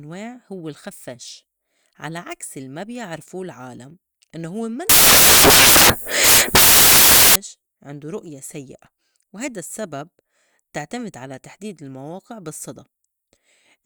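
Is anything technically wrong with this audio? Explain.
Yes. From 4.89 to 7.36 s, after "بيعرفو العالم إنّو هوّ" and before "عندو رؤية سيّئة وهيدا", the speech turns into loud, harsh broadband noise: samples built from the wrong bytes. The reader combines each sample's bytes in the wrong order or offset, so the rapidly fluctuating low bits dominate every value. Unlike clipping or a noise burst added over the speech, the speech itself is replaced.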